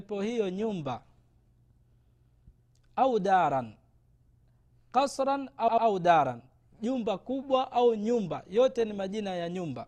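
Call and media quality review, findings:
Repeated frames, 5.68–5.87 s: a stutter where the same 96 ms chunk replays twice more, adding 192 ms. Probably a frame run resent upstream of the decoder.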